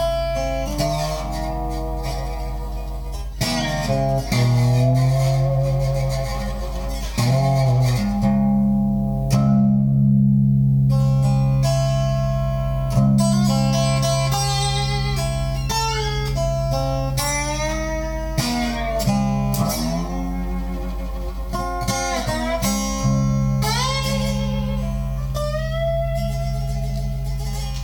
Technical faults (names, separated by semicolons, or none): none